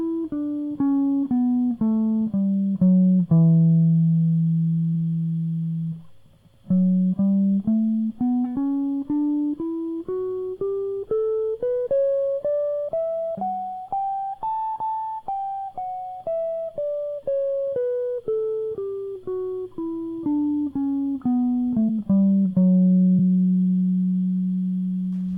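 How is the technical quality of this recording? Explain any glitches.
The music has four dropouts where compressed frames were skipped, at 8.55, 11.85, 21.88 and 23.18 s. At each, several whole frames went missing or were rejected by the decoder. Roughly 150 to 200 ms of music vanishes and playback jumps ahead. A waveform shows an abrupt phase break, and a spectrogram shows a thin vertical seam.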